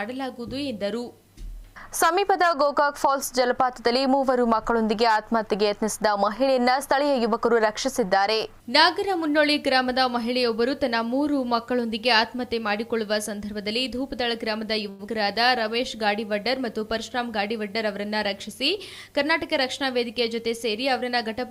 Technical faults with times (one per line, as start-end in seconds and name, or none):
14.89-15.01 short stall from a late packet
15.07-15.09 short concealed packet loss
16.95-18.49 jitter buffer speed-up